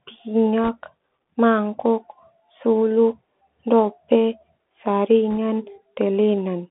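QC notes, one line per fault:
throughout, Bluetooth CVSD headset codec: the speech sounds narrow and boxed in, with nothing above about 3.4 kHz and thin lows below about 200 Hz. A fine granular hiss sits under it, and sibilants turn scratchy. Each sample is coded as a single up-or-down step whose size adapts, which fits a 64 kbit/s headset stream. Fast, loud high-frequency movement outruns the step size and smears into distortion, and the constant stepping leaves the grainy noise floor.
0.64 to 0.69 s and 5.31 to 5.37 s, bit errors on a Bluetooth voice link: in both spots a brief rushing, crackly roughness washes over the speech without any sharp click. Flipped bits on the headset link push the decoder a step the wrong way. Because each bit carries only a small step and the error fades as the decoder adapts, the damage spreads into noise rather than a pop. An error rate on the order of one percent explains the short crackle.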